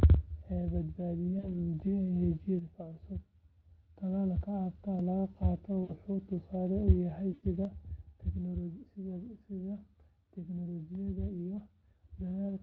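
At 1.39 to 1.54 s there is VoIP packet loss concealed by the speech codec. About 40 ms went missing, which fits two 20 ms frames. The decoder repeats its last pitch and filter at falling gain. The speech is briefly stretched into a buzzy tone or coloured noise that fades, then recovers weakly.

From 2.59 to 3.97 s, one channel drops out. The level falls abruptly by about 6 dB. A lost stereo channel summed to mono is the likely cause.

At 4.99 s a dropped buffer (overrun) is likely. Roughly a millisecond or two of sound is skipped, and the two sides butt together.

The same packet loss concealment returns at 5.83 to 5.93 s, with 60 ms lost. It comes again at 7.33 to 7.44 s, with 100 ms lost. The longer gap gives a longer smear.

At 7.65 s the channel dropout recurs and lasts to the end, again about 6 dB down. The Speex coding underneath adds only light coding damage.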